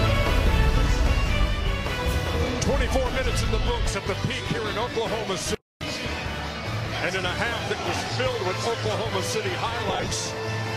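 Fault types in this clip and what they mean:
lost LE Audio frames: Between 9.89 and 10.12 s, about 120 ms of Bluetooth LE Audio frames went missing, scattered over 225 ms in runs of up to around 30 ms, which fits sixteen 7.5 ms frames. For each gap the LC3 decoder repeated the last spectrum with randomised signs, so steady tonal content turns into a noisy smear. A spectrogram shows clean harmonic lines breaking into short, diffuse patches, and the waveform shows brief stretches of irregular, noise-like texture.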